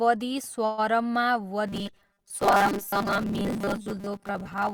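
At 0.65 s there's a call audio freeze lasting until 0.80 s. The speech stalls and the last sound gets stretched into a fading buzz or hiss for about 124 ms. Then the speech picks up right where it left off, so nothing's lost, just delayed. It's likely the jitter buffer ran dry while packets were held up.

From 1.67 s to the end, you get robotic sound from repeated short buffers. The speech turns into a stiff metallic buzz pinned at 200 Hz, which fits a 5 ms chunk being looped over and over. Most of the stretch is repeats rather than real audio, likely because new audio was arriving too slowly.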